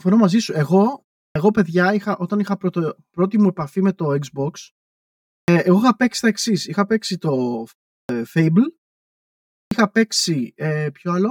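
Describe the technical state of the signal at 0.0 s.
At 0.0 s the speech already carries channel delay (comb filtering), which runs through the whole clip. One channel arrives roughly 5 ms behind the other, and when the two are folded to mono the shared content cancels at a regular series of frequencies, the first near 100 Hz. The result sounds hollow and phasey. On a spectrogram this shows as evenly spaced dark horizontal bands that stay fixed in frequency while the speech moves.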